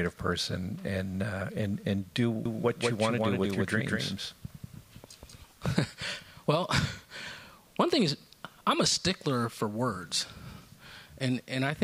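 From 2.45 to 5.43 s a doubled audio track appears: a second, full-band copy runs about a fifth of a second behind at roughly equal loudness, likely from a slower capture path. Unlike an echo, it neither decays nor carries room colour, and it cuts in and out abruptly.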